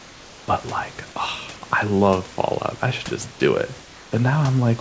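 Discontinuous transmission likely cut the sender's audio during pauses, so the receiver filled in comfort noise in place of the background from 0.00 to 0.48 s and from 3.82 to 4.12 s: a steady, featureless hiss about 2 dB quieter than the real room noise.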